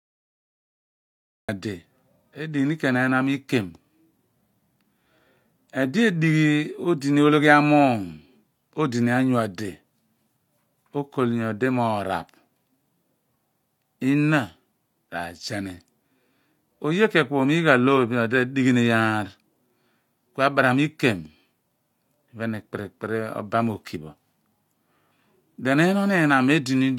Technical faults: cut-off start

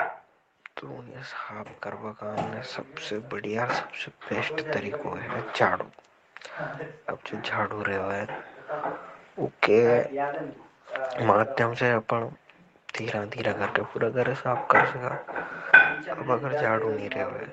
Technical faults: automatic gain rising

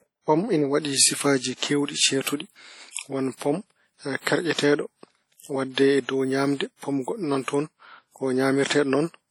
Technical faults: WMA compression

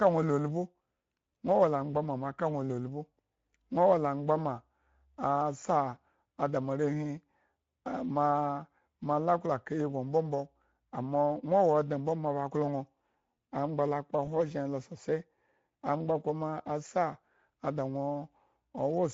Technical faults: Speex codec; VoIP packet loss concealed by the speech codec

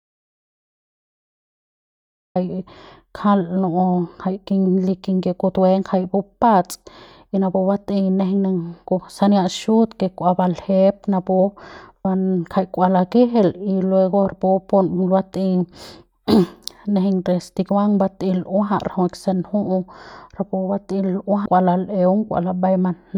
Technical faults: audio dropout to silence; compressed frames skipped

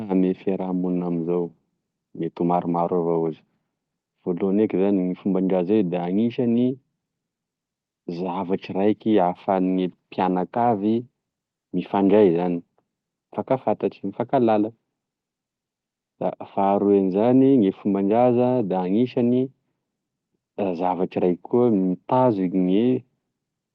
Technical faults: none

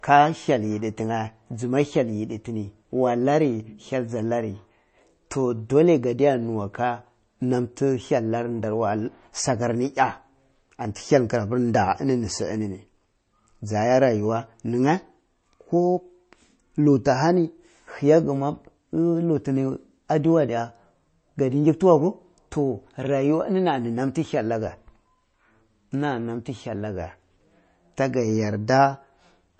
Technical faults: MP3 compression

